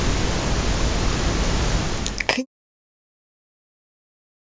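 There are no technical faults to describe in time order; the level simply eases down in a smooth, deliberate fade-out from about 1.5 s to 2.46 s.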